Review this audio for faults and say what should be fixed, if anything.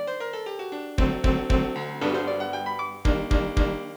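Nothing here needs fixing: the signal holds steady with no dropouts, clicks, distortion or timing disturbances anywhere in the clip.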